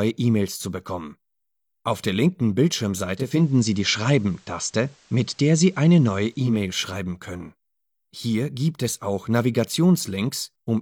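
From 3.07 to 6.65 s, faint hiss rises and level shifts about 2 dB: digital radio blending to FM analogue.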